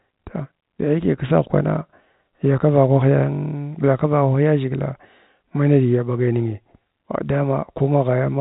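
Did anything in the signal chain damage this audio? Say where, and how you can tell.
No, nothing in the chain has damaged this speech. It has passed through G.711 telephone coding, which can be heard in the band stopping at about 3.8 kHz, as expected for a fixed-line telephone path.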